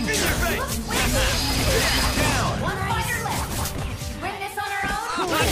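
No technical faults can be heard anywhere in this audio. Nothing in it calls for a timestamp or a cause.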